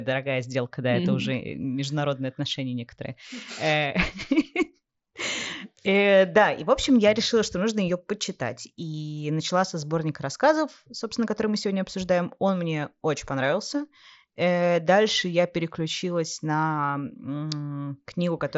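Nothing's amiss here: it's just speech coming through a Bluetooth headset link on the mSBC codec, which tops the sound out at around 8 kHz, and there's no technical problem to flag.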